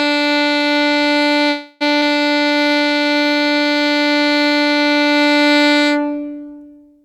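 At 1.49 s the music stops moving forward and is replaced by a decaying continuation of its last moment, a buzzy tail that fades without quite reaching silence until 1.83 s, when playback resumes exactly where it left off. This is a call audio freeze, most likely packets stalling in transit until the jitter buffer emptied. Roughly 0.31 s of filler was inserted and nothing was skipped. That separates it from a dropout, where material would vanish.

From 2.34 to 3.05 s the music drags: it plays at about 83 percent speed with the pitch unchanged, and sustained tones stretch. This is a jitter buffer slow-down. The receiver repeated single pitch periods over and over to rebuild its reserve, adding about 133 ms in total. Unlike the freeze, the sound never stalls or decays. It keeps flowing, only slower.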